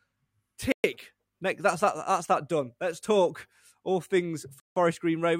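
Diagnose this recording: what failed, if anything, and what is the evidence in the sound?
Two blocks of digital silence at the driver or buffer stage: 0.72 to 0.84 s (120 ms) and 4.6 to 4.76 s (160 ms, after "talk all things"). Both most likely come from unfilled output buffers. The abrupt cut and return, with no fade, rule out gating.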